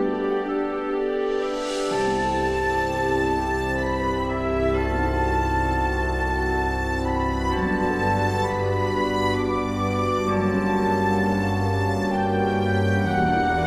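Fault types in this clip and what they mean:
No technical faults can be heard in this clip. Nothing in the audio calls for a fault entry.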